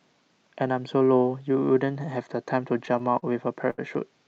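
From 2.85 to 3.24 s the speech drags and stutters in four brief hitches, the longest about 34 ms. These are repeated stalls (stutter): packets arrived late, so the jitter buffer kept emptying and the receiver extended the last sound each time. At 3.70 to 3.80 s a sound hangs on for about 77 ms. This is a short stall from a late packet: the buffer ran dry, and the audio was stretched until playback resumed where it left off.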